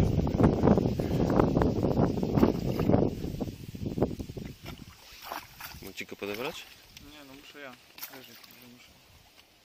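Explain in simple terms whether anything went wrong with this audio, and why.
At 0.54 s there is a tiny skip where an overlap between stream segments made the player trim away a sliver of sound, so the audio jumps forward.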